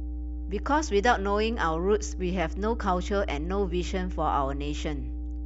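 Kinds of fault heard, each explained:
Mains hum: A steady low tone at 60 Hz runs under the speech from start to finish. It comes from the power line leaking into the signal, through a ground loop or a nearby transformer. Here the hum is strong. It sits only slightly below the level of the speech. It never fades or changes pitch. It stays present in the pauses, where it is heard on its own.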